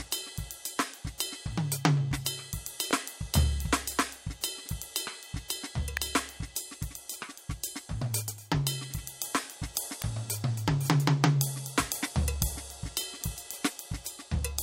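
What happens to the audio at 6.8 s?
Nothing goes wrong at 6.8 s: the music plays straight through that moment with no dropout, click or other fault.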